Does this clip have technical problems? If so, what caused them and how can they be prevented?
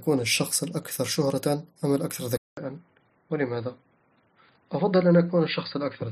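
Yes. Input switched to a poorer device at 2.37 s, lasting to the end: after a 200 ms silence the speech turns dull and boxy, with nothing above 4.8 kHz, a little quieter and over a faint new noise floor, likely from a narrower-band microphone taking over. Locking the input device before recording prevents it.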